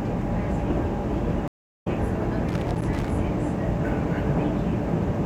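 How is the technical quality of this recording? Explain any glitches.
The recording has two faults, both in the first few seconds.

Stream reconnect, 1.48 to 1.87 s: the connection dropped, so the player fell silent for about 0.38 s, then reconnected and started a new decoder partway through the stream. The sound picks up again roughly 0.4 s later than where it stopped, so a short stretch is missing.

Loose connector crackle, 2.49 to 3.11 s: a worn or dirty contact kept making and breaking as it shifted, chopping the signal on and off many times in quick succession. This comes through as an irregular burst of crackling and scratching lasting about 0.6 s.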